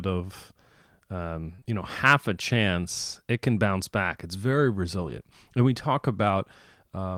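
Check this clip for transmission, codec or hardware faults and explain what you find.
Two transmission faults are audible.

Short concealed packet loss runs from 1.55 to 1.67 s, just before "you know half a". Three 20 ms gaps were filled by extending the preceding sound. It smears briefly.

A lost packet rebuilt from error correction sits at 5.01 to 5.11 s, before "and we talk". A low-bitrate backup copy replaced 60 ms, likely three packets. It sounds rougher and noisier.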